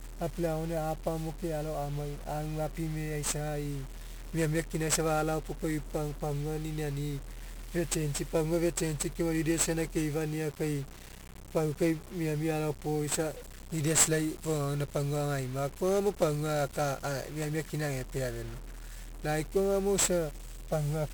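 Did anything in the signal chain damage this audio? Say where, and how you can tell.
Yes. The damage happens at the codec stage and lasts the whole speech clip. It has the sound of 1-bit DFPWM compression, heavily applied and consistent with a rate of about 48 kbps. Each sample is stored as a single up-or-down bit nudging an adaptive level, so a dense, fuzzy crackle rides on the voice and hiss swamps the treble. Analogue hiss stays steady underneath the sound, but this noise rises and falls with the speech. Low-bitrate transform codecs produce swirling, band-limited artefacts, whereas this noise is broadband.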